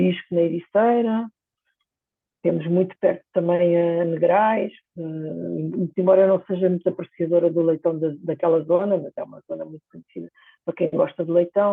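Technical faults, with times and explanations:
No technical faults can be heard in this speech.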